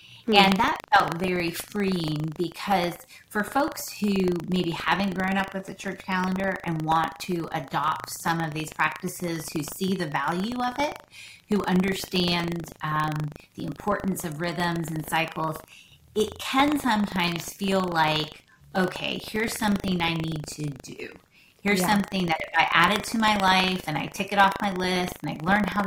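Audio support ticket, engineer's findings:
Buffer tearing, throughout: robotic 25 Hz rattle under signal. Ring-buffer pointers crossing every 40 ms period; a small slice replays audio about 100 ms old.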